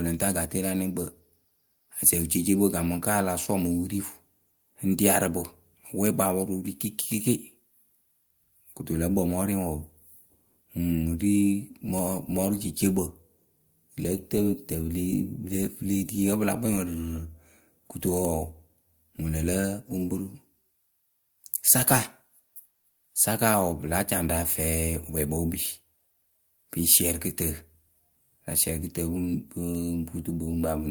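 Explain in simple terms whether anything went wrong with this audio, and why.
Nothing went wrong here: the speech comes across steady and intact the whole way, with no technical problems to point to.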